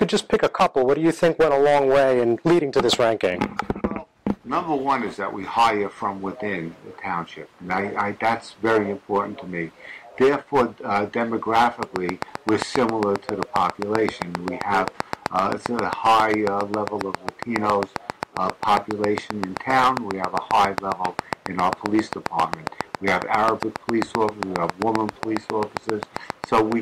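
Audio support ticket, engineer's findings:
Train of clicks, 11.83 s to 26.73 s. Likely cause: periodic interference from nearby equipment or a failing interface, injecting a pulse at a steady 7.45 per second. Roughly a hundred near-identical clicks, around 20 dB above the signal, heard as regular ticking over the sound and through pauses until the end.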